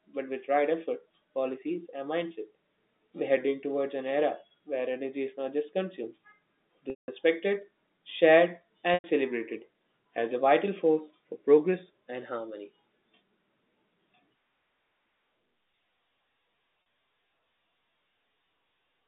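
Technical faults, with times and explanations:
6.9 to 16.86 s, packet loss with pitch repetition: gaps of 180 ms at 6.9 s, 100 ms at 8.94 s just before "celebrated as a vital", and 40 ms at 16.82 s, which fits 20 ms packets. The receiver loops the last pitch cycle to fill each hole. The 40 ms gap sounds like a briefly held, buzzy tone. The longer two fade toward silence before speech cross-fades back in.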